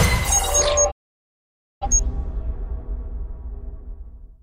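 At 0.90 s a digital broadcast dropout mutes the audio with a quick 20 ms fade. The receiver lost valid frames, so about 0.9 s of programme is missing until sound resumes at 1.87 s.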